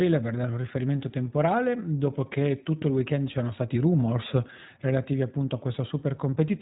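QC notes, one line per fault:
Throughout: iLBC codec. The speech is band-limited with nothing above 3.8 kHz, and it carries a plainly audible rough, slightly synthetic texture. The coder rebuilds the excitation for each 20 ms frame independently rather than predicting from the previous one, so small frame-to-frame discontinuities roughen the speech. The degree of roughness fits the higher iLBC mode at around 15.2 kbps, and the missing upper band gives a thin, telephone-like tone.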